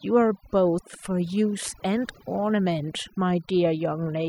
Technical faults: overdone noise removal

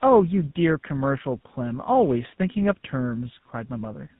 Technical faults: tandem speech coding

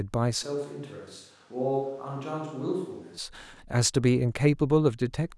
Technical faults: switch to a distant microphone

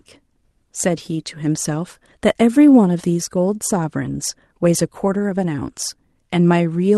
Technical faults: none

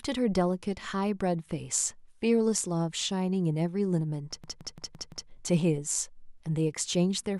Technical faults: system hang loop

